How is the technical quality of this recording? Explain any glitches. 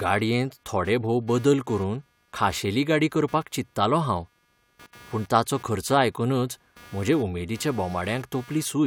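The recording carries a steady fault across the whole speech clip: computer activity noise. Changing load on the processor, graphics card or mouse is disturbing the ground that the audio circuit shares with the computer, so the machine's activity leaks into the signal. The result is a buzzy, chirping texture pulsing at around 200 per second, sitting roughly 30 dB below the speech. Its rise and fall follows the computer's workload rather than anything in the recorded sound.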